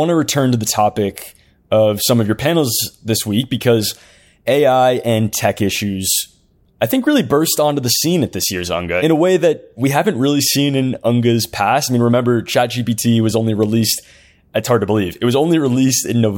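No technical faults can be heard anywhere in the signal.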